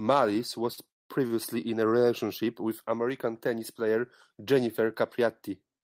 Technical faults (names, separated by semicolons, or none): short stall from a late packet; call audio freeze